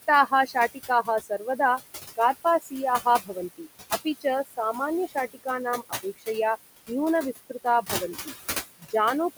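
Noise suppressor artifacts run through the whole recording. The suppressor judges, frame by frame, which frequency bands hold steady background and pulls them down by about 15 dB. The room noise, which sits about 12 dB below the speech, therefore rises and falls with the talking. It drops away in the pauses and comes back underneath each phrase.

Speech cut by the noise suppressor happens at four points. From 0.27 to 1.59 s, around 0.4 s of speech is pulled down by as much as about 15 dB. From 2.16 to 5.46 s the losses add up to roughly 0.7 s and reach about 19 dB. From 5.83 to 6.28 s about 0.2 s sinks by up to about 20 dB. From 7.33 to 8.28 s around 0.3 s drops by up to about 14 dB. In each case the suppressor mistook quiet speech energy for noise and attenuated it with the background, so soft consonants and trailing syllables sound swallowed and faint.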